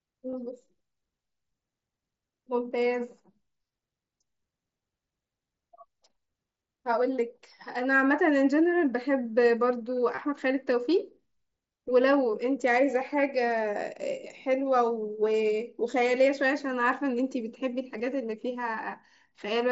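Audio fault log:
0.31 s, 10.15–10.18 s and 17.98 s: concealed Bluetooth headset packet loss. Each is a buzzy held tone with a small warble where real audio returns, lasting 15 ms, 22.5 ms and 15 ms. Headset packets went missing, and the receiver filled each gap by repeating the closest-matching stretch of the preceding waveform.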